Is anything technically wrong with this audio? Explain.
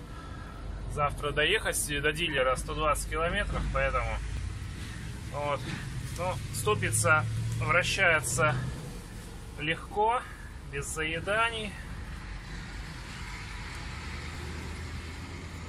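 Yes, there are three tiny skips from an overlap between stream segments: a single one at 2.38 s, another from 4.37 to 4.39 s, and a third at 14.35 s. Each drops roughly 15 to 20 ms, so the waveform jumps and you hear a small click or hiccup. They fall on a regular two-second grid, which fits 2-second segments whose timestamps overlap slightly, so the player trims audio that wasn't actually duplicated.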